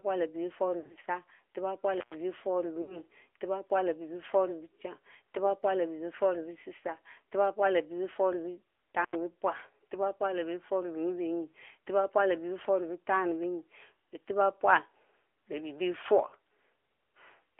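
Throughout, the speech sounds boxy, buzzy and synthetic, confined to roughly 300 Hz to 3.4 kHz. This is the AMR narrowband mobile codec, whose damage is plainly audible and fits a mid-rate mode around 10 kbps.

From 0.80 to 0.99 s the sound warbles and dips in brief stutters, with 120 ms of audio missing across 160 ms and no gap longer than 40 ms. These are lost AMR speech frames, which the decoder patches by repeating its last good settings at falling gain.

From 1.94 to 2.16 s the sound cuts out for about 114 ms, with crackle at both edges. An intermittent contact, a loose cable or plug, opened the line briefly.

From 2.82 to 3.00 s, lost AMR speech frames return as a smeared, fading stretch with 60 ms of audio missing.

From 9.03 to 9.15 s, another intermittent contact drops the sound for about 85 ms, with crackle where the line opens and closes.

From 16.28 to 16.35 s, a 40 ms run of lost AMR speech frames gives a short warbling dip.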